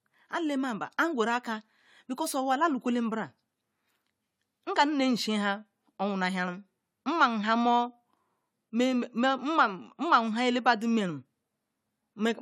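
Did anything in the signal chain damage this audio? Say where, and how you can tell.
Yes, at the codec stage: generation loss throughout. Swirly, hollow speech, blurred attacks and nothing above 18.9 kHz point to noise compounding across likely four or so 96 kbit/s AAC-LC re-encodes.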